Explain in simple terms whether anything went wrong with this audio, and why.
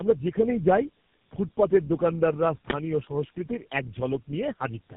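The call passed through three phone speech coders in a row, each squeezing the already-squeezed result of the last. This is tandem speech coding, and it lasts the whole clip: the speech sounds rough, muffled and warbly, with nothing above about 3.5 kHz.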